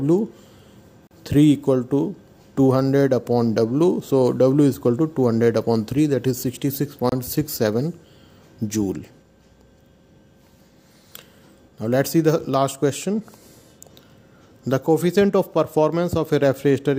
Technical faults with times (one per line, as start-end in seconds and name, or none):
1.07-1.11 gap between stream segments
7.09-7.12 gap between stream segments